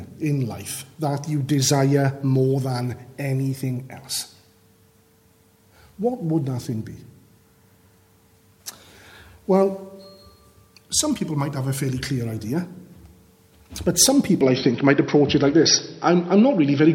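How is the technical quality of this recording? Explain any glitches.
One fault is audible. From 14.41 s to the end, the audio abruptly turns duller, with nothing above 5.8 kHz, a level shift of roughly 5 dB and faint new background noise. This is likely an input switched to a poorer device with a narrower band. There is no gap at the changeover.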